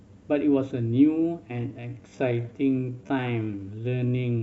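From 1.43 s to the end, there's a time-stretched section: the speech suddenly slows to about 0.62 times its pace while pitch holds steady. It's likely software stretching by repeating short chunks, which leaves a dragging pace.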